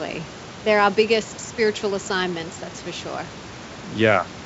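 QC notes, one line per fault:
No faults heard.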